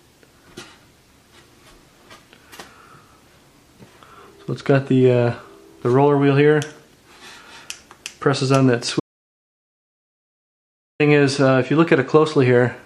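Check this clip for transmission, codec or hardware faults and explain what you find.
One fault is present. Audio dropout to silence, 9.00 s to 11.00 s: the input was likely lost through a disconnected device, a failed link or a stray mute while recording continued. The sound cuts off mid-flow, leaves about 2.0 s of silence with no room tone, then resumes.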